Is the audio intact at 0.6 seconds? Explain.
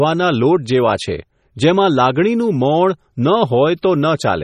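No. Heavy MP3 compression, likely starved of bits as at 32 kbps, runs throughout, removing everything above 14.8 kHz and flickering weak frequency lines, so the speech sounds watery and swirly.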